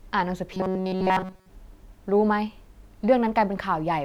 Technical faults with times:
0.54-1.50 robotic sound from repeated short buffers

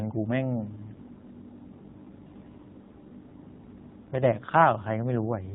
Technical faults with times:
0.00-5.54 AMR narrowband mobile codec

